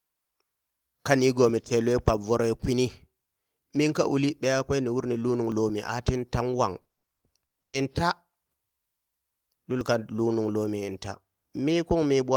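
At 0.57 s and 5.52 s the speech skips ahead by around 10 ms each time. That's likely a dropped buffer (overrun), where the input overwrote a chunk before it got read. From 6.73 to 7.75 s, repeated packet loss makes the speech choppy. Holes up to 120 ms get patched by stretching the preceding sound, which covers about 40% of that stretch. At 9.81 s another likely dropped buffer jumps the speech forward by roughly 20 ms.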